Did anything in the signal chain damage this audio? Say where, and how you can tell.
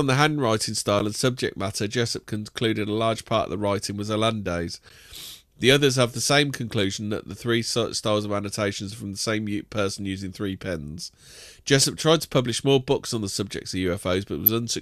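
Yes, at the codec stage: a corrupt frame was decoded twice. A short burst of misplaced energy runs from 11.80 to 11.85 s, just before "tried to publish more", and another, stronger one from 14.46 to 14.48 s. Each spans only a few codec frames. Flipped bits made the decoder apply wrong gains and codes, putting energy at the wrong frequencies. Packet loss would instead leave a gap or a smeared repeat, not a loud foreign blip.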